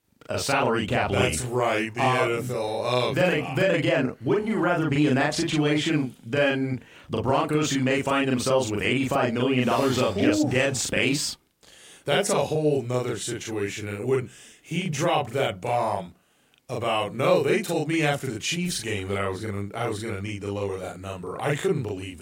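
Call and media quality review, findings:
Speech doubled throughout, a second copy trailing each syllable at equal level. Channel delay (doubling): one channel about 40 ms late, consistent with a long buffer on that leg. Both channels then summed to mono, so the late copy is heard as a slap echo.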